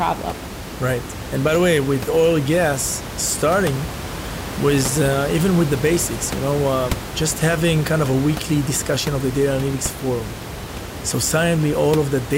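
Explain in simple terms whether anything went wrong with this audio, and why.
Nothing went wrong with this speech recording. The only other thing you can hear is some background noise from the room, which sits well below the speech and is simply part of where it was recorded.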